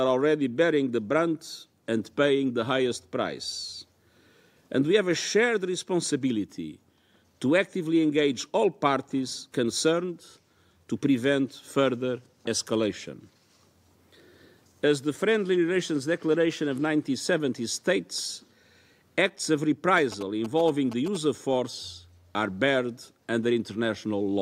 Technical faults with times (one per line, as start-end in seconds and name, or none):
19.97-21.17 GSM signalling bursts